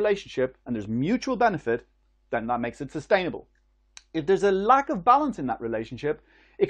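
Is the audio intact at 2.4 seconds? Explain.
Yes, at 2.4 seconds the speech plays through cleanly, with no dropout, click, distortion or other fault audible at that moment.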